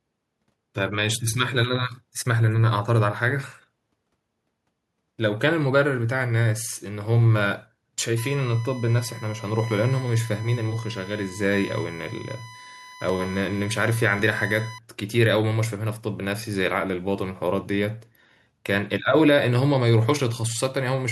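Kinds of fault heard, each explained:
USB whine: A steady, fixed-pitch tone at 1 kHz sits under the speech from 8.18 to 14.78 s, roughly 20 dB below it. The pitch matches the bus's 1 ms frame rate. Each burst of current the USB interface draws per frame leaks into the audio through the shared power or ground. That turns the frame timing into an audible 1 kHz whine for as long as the bus is active.
Dropped buffer (overrun): At 13.09 s there is a small jump forward in the speech, losing around 5 ms of sound with no gap of silence. The likely cause is an overrun. The program failed to read its samples before the hardware wrote over them, so that chunk was lost and the audio on either side was joined directly, producing the discontinuity heard as the jump.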